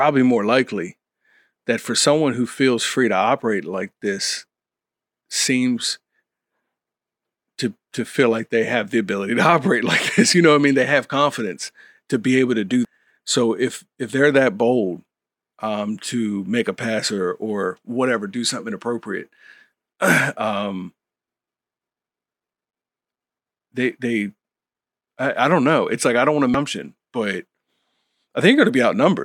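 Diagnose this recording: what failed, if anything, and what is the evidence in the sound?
Damaged data in a compressed stream, at the codec stage: brief blips at 12.85 s and 26.54 s, where the decoder misreads corrupt frames and resyncs, unlike silent network dropouts.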